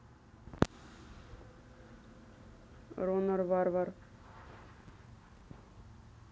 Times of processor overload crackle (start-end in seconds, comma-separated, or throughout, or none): 4.74-5.48